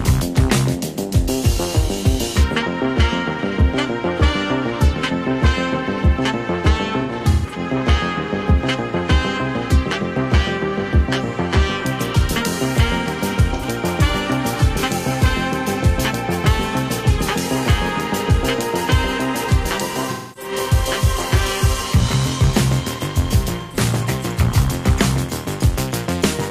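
The audio has four dropouts from AAC frame loss with concealment, where the decoder papers over missing frames by reusing the last good spectrum. The first, from 7.00 to 7.59 s, is about 300 ms of loss scattered across half a second, the longest stretch around 150 ms, so it smears and goes noisy in patches. Shorter ones follow at 13.53 to 13.65 s, 20.10 to 20.52 s and 23.60 to 23.80 s, each a brief phasey, washed-out blur.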